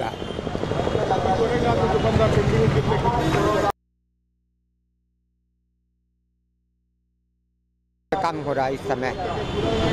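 At 3.70 s the sound drops out abruptly and stays gone until 8.12 s, a gap of about 4.4 s. That's an audio dropout to a faint residue: the wanted signal vanishes, but the line behind it is clearly still live, because what's left is a low mains hum sitting roughly 50 dB below the normal level. It's a hard cut in and out, not a fade, so the likely cause is the source disconnecting while the input stayed open and picked up hum.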